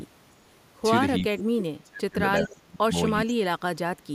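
A DC offset runs through the whole speech recording: the waveform sits off the zero line by a constant amount, so the trace is visibly shifted up or down, and positive and negative peaks are uneven. You don't hear it as a sound, but it uses up headroom on one side. On a spectrogram it appears as a steady band of energy pinned to the very bottom row, at 0 Hz.

From 1.23 to 2.19 s, 2.39 to 2.94 s, and 3.21 s to the end, the speech drops sharply, by around 30 dB at its deepest. It thins out, loses its upper frequencies, or breaks into fragments. This is speech suppressed in double talk, likely from an echo canceller that heard the far side at the same time and turned everything down. The waveform shows the envelope caving in over each stretch, and the spectrogram shows the high end thinning or vanishing.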